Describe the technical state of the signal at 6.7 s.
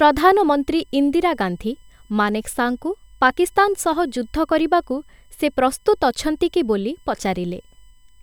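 At 6.7 s the speech carries a faint USB whine, present throughout the clip. The bus's 1 ms frame current leaks in through power or ground, giving a fixed 1 kHz tone with harmonics, strongest at 3 kHz and far below the speech. A spectrogram shows thin, steady horizontal lines at 1 kHz multiples.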